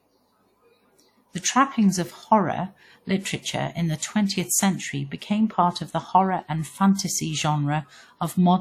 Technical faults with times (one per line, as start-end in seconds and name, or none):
0.00-8.60 WMA compression